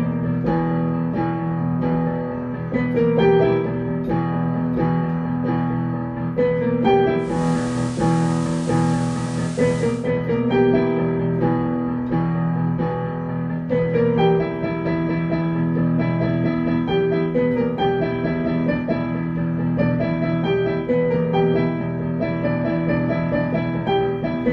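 Digital radio blending to analogue runs from 7.17 to 10.12 s. The receiver lost its digital stream and cross-faded over 318 ms to the FM broadcast, then back. Hiss rises to around 25 dB below the signal, and the level shifts by about 2 dB.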